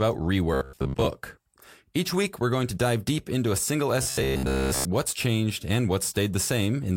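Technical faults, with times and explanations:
0.54–1.06 s and 4.03–4.85 s (between "deep into a single" and "what's changed and"), robotic sound from repeated short buffers: speech turns into a rigid metallic buzz at 66.7 Hz. This is likely a 15 ms chunk replayed while most of the real audio is skipped. The spectrogram shows evenly spaced harmonic stripes, and the waveform shows identical repeating cycles.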